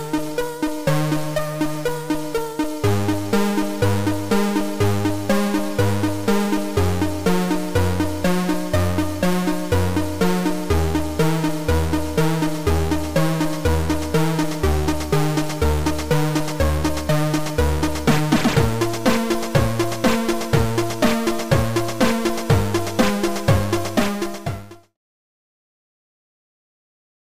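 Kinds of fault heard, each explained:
No faults heard in this audio.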